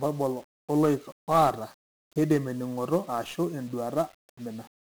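1-bit DFPWM compression runs through the whole speech clip, from the first sound to the last. Each sample carries a single bit that only pushes an adaptive level up or down, so the waveform is rebuilt from coarse steps. The damage is heavy. Strong broadband quantisation noise sits under everything, the speech sounds fuzzy and crackly, and its upper frequencies are buried in hiss. The grain is consistent with a stream of about 48 kbps.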